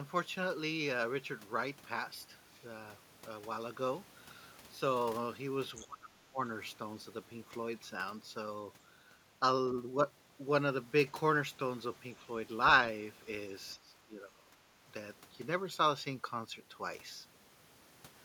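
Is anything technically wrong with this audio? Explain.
Yes. Two echo-canceller problems can be heard in this speech.

Other side's voice leaking through, 5.80 to 5.87 s: a brief scrap of a second voice sits about 20 dB below the talker. It is likely loudspeaker playback that reached the microphone and was not fully cancelled, so it sounds faint and clipped short.

Speech suppressed in double talk, 5.83 to 6.40 s and 13.75 to 14.56 s: the talker's level sinks, by roughly 25 dB at the first spot and roughly 15 dB at the second, for around half a second and under a second. This is likely the canceller failing to tell the talker from the echo while both sides were active and ducking everything together.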